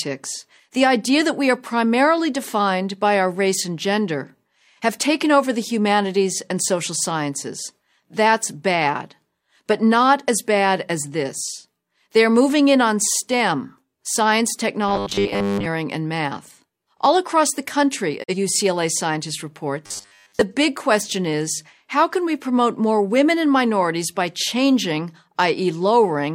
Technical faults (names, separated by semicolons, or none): robotic sound from repeated short buffers; digital broadcast dropout